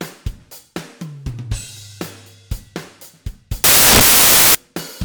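Samples built from the wrong bytes, 3.64 to 4.55 s: the reader misassembles each sample's bytes, so fast-changing low bits dominate, turning the audio into loud, harsh broadband noise.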